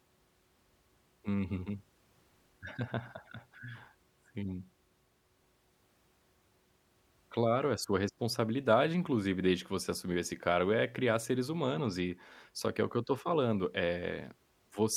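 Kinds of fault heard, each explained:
No technical faults can be heard in this speech.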